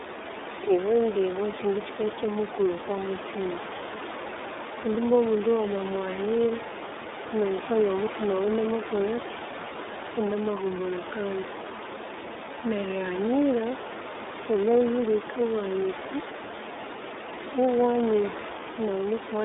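From start to finish, the speech carries the sound of the iLBC codec. The band runs only from about 300 Hz to 3.7 kHz, so the top end is gone and the speech sounds thin and boxed in. Each 30 ms frame is coded on its own, which fits the 13.33 kbps mode. The damage is plainly audible. Voiced sounds turn rough and slightly synthetic. The room noise, about 14 dB below the speech, comes through poorly coded.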